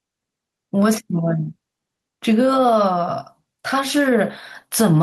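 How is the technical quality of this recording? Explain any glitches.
The technical quality is limited by gain pumping that runs through the whole speech recording. The gain ducks by around 5 dB under each louder syllable and rises again in between, leaving the level squashed and breathing. The likely cause is input gain set far too high, with a fast limiter or compressor clamping down on each peak and then letting the level rise again. Unlike a noise gate, which mutes the gaps, pumping makes the gaps louder.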